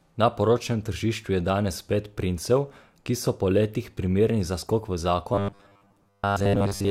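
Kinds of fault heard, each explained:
Robotic sound from repeated short buffers: after "primerni za skok v", from 5.35 s to 6.91 s the speech turns into a stiff metallic 100 Hz buzz that loosely follows the words, likely from a 10 ms chunk replayed over most of that stretch.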